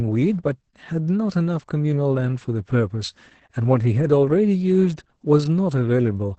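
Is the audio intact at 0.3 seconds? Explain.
No. At 0.3 seconds the speech is already affected by Opus voice compression, which runs through the entire clip. The encoder is working in its SILK linear-prediction mode at a wideband setting and is starved of bits, at a rate that points to roughly 10 kbps. It discards everything above about 8.4 kHz and quantises the excitation coarsely. The result is heavy damage: the speech sounds muffled, hoarse and slightly robotic.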